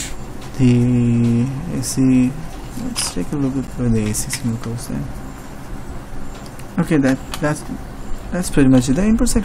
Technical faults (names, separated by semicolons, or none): block of digital silence